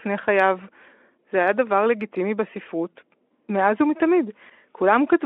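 No technical faults can be heard at any point in the clip, so there is nothing to set out in time order.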